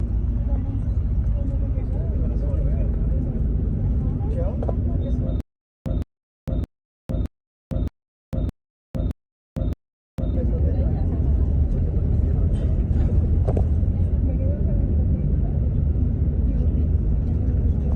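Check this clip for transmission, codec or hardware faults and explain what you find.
A playback or stream stall, likely, produced stutter with silent gaps from 5.40 to 10.35 s. On each retry, the same 164 ms fragment replayed, then 454 ms of silence followed. This repeats eight times every 618 ms, and the audio due in that stretch is lost.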